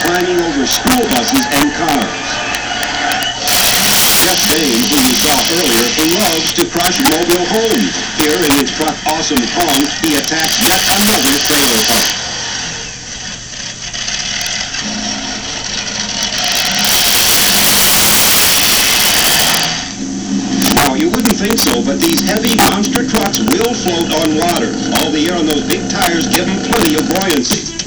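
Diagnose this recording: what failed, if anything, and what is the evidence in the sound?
Integer overflow in the sample-format conversion stage: throughout, loud peaks driven about 10 dB over full scale wrap to the opposite sign, producing violent cracks sharper than clipping on a small fraction of samples.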